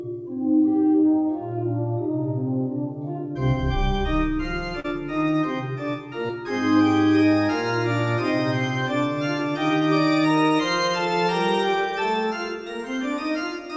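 At 4.80 to 4.86 s and 6.28 to 6.31 s there is short concealed packet loss: audio arrived too late, and the decoder extrapolated the preceding sound for about 40 ms and 11 ms, leaving brief smears. The band stops at 8 kHz, which fits G.722.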